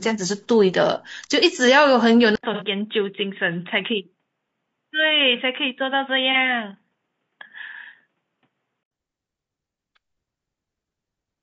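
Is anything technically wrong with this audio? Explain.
Yes, there are three problems. Throughout the speech there is low-delay AAC compression damage, most likely from AAC-ELD at a low bitrate around 32 kbps. Its short transform frames resolve the voice harmonics coarsely, so the speech sounds plainly rough and grainy, with noise filling the gaps between harmonics and a thin, synthetic upper band.

From 2.35 s to 8.91 s the input sounds switched to a poorer device, likely a secondary microphone or a headset's call profile. An 80 ms silence marks the changeover. After it, nothing above 3.8 kHz comes through, so the voice turns dull and boxy. The level drops a few dB, and a faint new noise floor sits well below the speech.

There are two AAC frame losses with concealment, at 2.54 to 2.64 s and at 6.32 to 6.36 s. The decoder covers the missing data by extrapolating the last good spectrum. 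The first gap is about 60 ms, which fits two lost frames, and the second is about 30 ms. Each one sounds like a brief smeared, noisy or phasey patch.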